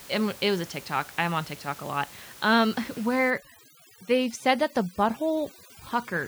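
From 3.30 s to the end, the background suddenly drops and breaks up into twinkling specks. This is overdone noise removal: a noise reduction stage set too aggressively pushes individual frequency bands far down or shuts them off whenever they sit close to its noise estimate. It pushes down the room noise, which is audible before this point at about 21 dB below the speech, and strips the quieter parts of the voice along with it.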